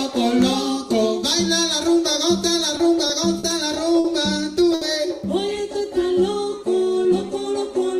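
A recording of everyday sounds with late-packet stalls and a jitter buffer speed-up. Short stalls from late packets occur at 2.77, 3.07, 3.39, 3.99 and 4.74 s. Each time the receiver stretched the last sound while waiting, holding it for 20, 20, 40, 50 and 70 ms. Nothing is lost, but sounds hang briefly. From 6.97 to 7.55 s a jitter buffer speed-up follows. The receiver trimmed tiny pitch-period slices to shed about 70 ms of built-up delay. The audio runs about 9 percent fast at unchanged pitch.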